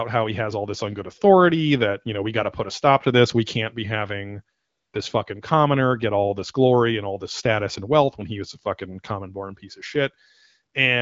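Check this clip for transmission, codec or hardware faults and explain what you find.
One fault is present in this speech clip, which carries the light colouring of AMR wideband (HD Voice) coding at a rate that points to about 12.65 kbit/s.

AMR comfort noise occurs from 4.57 to 4.93 s. After "can't be having", the phone judged the line silent and sent no speech frames for 360 ms. The receiver filled the gap with synthetic noise built from a coarse level and spectrum estimate. The real background gives way to a smooth, steady hiss until "this fucking commoner get" resumes.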